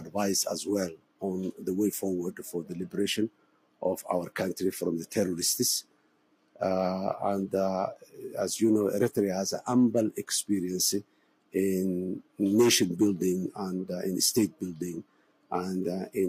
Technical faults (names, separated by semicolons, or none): noise suppressor applied to music or sounds; sound cut by the noise suppressor